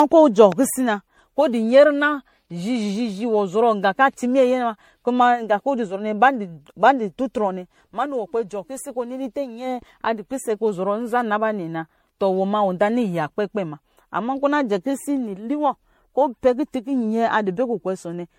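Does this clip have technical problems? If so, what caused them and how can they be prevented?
Yes. Generation loss runs throughout, likely from repeated MP3 re-encoding around seven times, which fits a 64 kbit/s chain; the speech sounds swirly and hollow, attacks blur, and nothing lies above 16.5 kHz. To prevent it, edit from a lossless master and encode to MP3 only once, at the final step.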